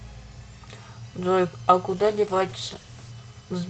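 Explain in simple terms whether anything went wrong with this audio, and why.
From 1.91 to 3.19 s there's a call bitrate drop: the connection thought bandwidth was short, so the codec squeezed the speech into far fewer bits, making it rough and smeared.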